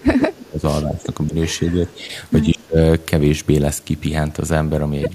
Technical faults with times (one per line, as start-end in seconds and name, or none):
0.00-1.33 speech suppressed in double talk
1.60-2.12 speech suppressed in double talk
2.46-2.79 speech suppressed in double talk